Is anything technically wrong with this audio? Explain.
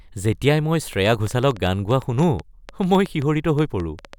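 Yes. From 0.93 to 4.14 s, a train of clicks ticks unevenly over the speech, roughly seven a second and about 5 dB louder, likely interference injecting pulses.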